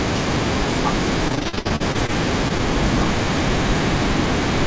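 From 1.28 to 2.10 s the speech turns choppy with bits missing. This is repeated packet loss: each gap, up to 60 ms, is patched by repeating earlier sound.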